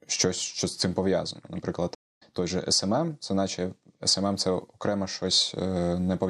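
At 1.95 s the speech cuts out in a stream reconnect: the connection dropped, the player fell silent, then reopened the stream and started a new decoder partway through. The gap lasts about 0.21 s, with the fault ending at 2.23 s, and the speech picks up roughly a fifth of a second further on, so that stretch is simply missing. On a waveform this shows as a flat-line hole; on a spectrogram, a clean vertical blank band with an abrupt leading edge.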